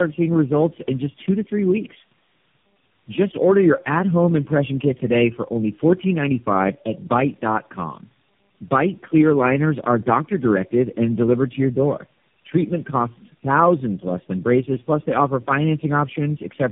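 Throughout the speech, tandem speech coding is audible: the call passed through four low-rate speech codecs in a row, with each decoded and coded again at every link boundary, so each coder worked on the previous one's degraded output. The result sounds rougher and noisier than one pass through any single codec would. That accumulated roughness sets it apart from a single narrowband codec, which would also explain the band limit, with nothing above 3.6 kHz.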